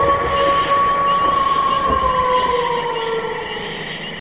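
Nothing stood out as a technical fault anywhere on listening.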